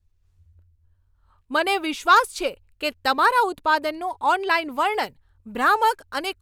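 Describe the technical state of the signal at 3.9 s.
At 3.9 s the speech signal is intact, with no audible dropout, distortion, or other technical fault at that moment.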